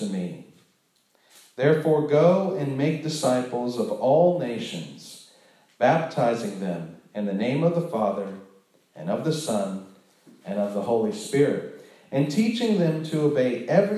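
Nothing in the audio stood out as a technical problem on listening.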